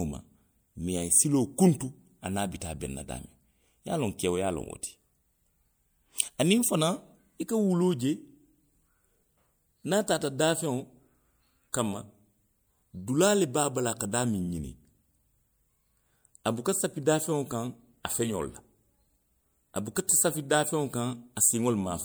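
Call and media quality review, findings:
Short hiss ahead of a sharp speech onset at 11.72 s, attack sounding smeared and soft; noise smear about 18 ms. Pre-echo from the transform codec. Block quantisation noise, sized for the loud attack, spreads back into the quiet lead-in.

Same pre-echo at 19.95 s, tighter at about 10 ms. Onset fell late in a coding block, so block-wide noise filled the silent gap before it.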